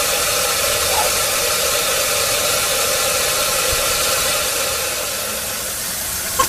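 No technical faults can be heard anywhere in this clip.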